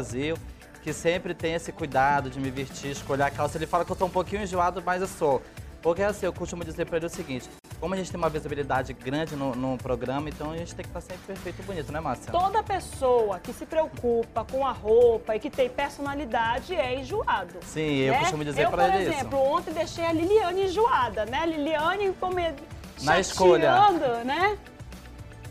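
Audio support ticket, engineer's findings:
Gap at a join of encoded pieces, 7.59 to 7.64 s. A 49 ms dropout cuts into continuous sound, with edges smeared by the codec; the sound resumes where it stopped. Probable component: segment concatenation. Separately encoded pieces were joined untrimmed, keeping the encoder's start delay and last-frame padding.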